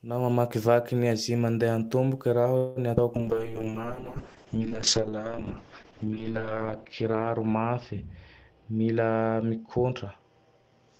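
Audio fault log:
2.57–2.78 s, call audio freeze: The sound stalls into a fading buzz-like continuation of the last moment for about 0.19 s, then resumes where it left off with nothing lost. This is likely a delivery stall that emptied the jitter buffer, which filled the wait from the preceding audio.
2.96–2.99 s, skip ahead: Playback jumps forward with only a tiny bridge of roughly 10 ms, dropping around 70 ms of sound and joining the two sides almost directly. Audio already queued behind the discarded stretch let the receiver cut straight to it.
3.17–10.99 s, call bitrate drop: From here to the end the sound turns rough and muffled, losing its top end. The encoder fell from 32 to 6 kbps and narrowed the band from 20 kHz to 8 kHz, holding the lowest rate for about 3.03 s.
3.34–4.17 s, jitter buffer slow-down: The speech drags to about 92% speed at unchanged pitch, with sounds stretched. 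The receiver repeated single pitch periods and bits of pauses over and over, adding about 78 ms to rebuild its reserve.
8.51–10.05 s, jitter buffer speed-up: The speech hurries along at about 112% speed with its pitch intact, sounding rushed. With too much audio queued, the receiver trimmed short pitch-period slices repeatedly, removing roughly 200 ms to bring the delay down.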